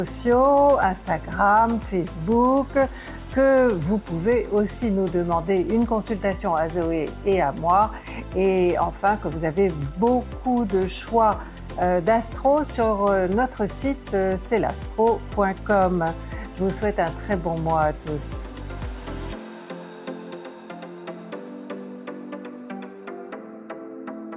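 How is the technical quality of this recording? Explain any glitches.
No glitches or faults heard.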